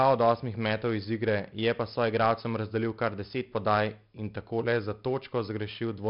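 Speech recorded through 4-bit ADPCM compression, a rate that fits roughly 11 kHz sampling, leaves gritty level-tracking hiss on every loud syllable, distorted attacks, and nothing above about 5.3 kHz throughout.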